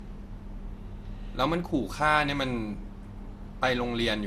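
Throughout the speech, the sound is swirly, smeared and hollow, with consonant attacks blurred and a watery texture that a single lossy pass would not produce. The likely cause is generation loss: around ten rounds of decoding and re-encoding, each quantising on a fresh frame grid so errors pile up; the character fits MP2 at 96 kbit/s. A spectrogram would show nothing above 15 kHz, patchy holes and smeared onsets.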